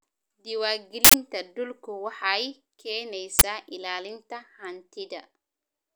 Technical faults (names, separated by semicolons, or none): uninitialised buffer